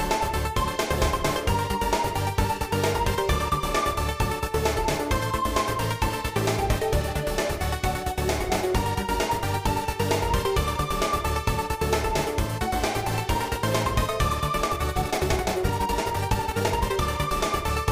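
From 14.53 s to 17.01 s there is a time-stretched section. The audio suddenly runs faster, at about 1.35 times its normal pace, yet the pitch does not rise. It sounds rushed. This is likely software squeezing the passage to fit a shorter length, dropping slices to keep the pitch steady. At 17.01 s the pace returns to normal.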